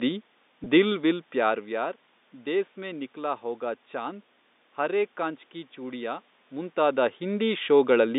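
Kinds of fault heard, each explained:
Packet loss with pitch repetition: one 20 ms packet went missing at 0.64 s, and the receiver repeated the last pitch period, leaving a brief held, buzzy sound.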